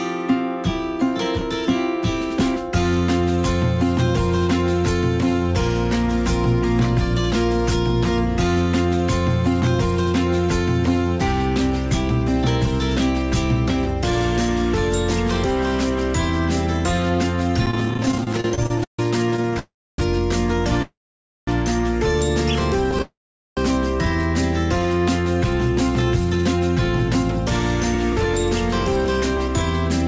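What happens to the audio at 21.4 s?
At 21.4 s the sound is stalled: from 20.82 s to 21.49 s a brief buzz fades into roughly half a second of silence, then resumes where it stopped. This is likely a call audio freeze, with delayed packets leaving the jitter buffer empty and inserting a 650 ms gap.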